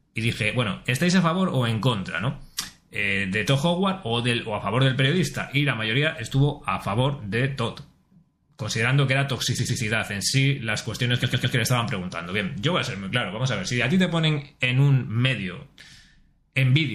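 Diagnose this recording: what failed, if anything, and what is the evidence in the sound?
Codec stage: the whole clip sounds watery and swirly with cut-off, dulled treble, likely MP3 compression at about 64 kbps starving fine detail of bits.

Storage or network stage: repeated frames replay blocks, producing stutters: a 26 ms repeat at 4.07 s, then a 105 ms block repeated twice from 9.58 s and three times from 11.22 s.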